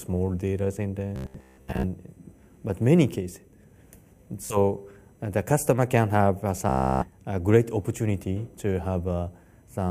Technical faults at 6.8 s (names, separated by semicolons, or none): Bluetooth stutter